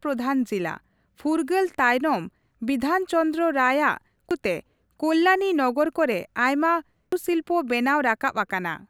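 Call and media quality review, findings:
Damaged data in compressed stream, 4.31 s, just before "ᱛᱮ ᱠᱚᱞᱞᱟᱱᱤ ᱱᱚᱜᱚᱨ ᱠᱚᱨᱮ": brief glitch in speech. Decoder misreads corrupted frame, loses sync, resyncs at next header. Spectrogram: short broadband vertical smear. Waveform: abrupt discontinuity.

Same fault, 7.12 s, just after "ᱠᱚᱞᱞᱟᱱᱤ ᱱᱚᱜᱚᱨ ᱠᱚᱨᱮ ᱟᱭᱢᱟ": second glitch, same mechanism. Spectrogram: isolated full-band streak. Waveform: sharp step. Component: bitstream transport or storage feeding the decoder.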